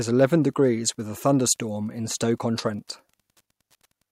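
A faint, steady ticking runs under the speech for the whole clip, about ten clicks a second and some 45 dB below the voice. It is Wi-Fi interference: a nearby radio's beacon, repeating every 102.4 ms, is being rectified by the audio circuitry.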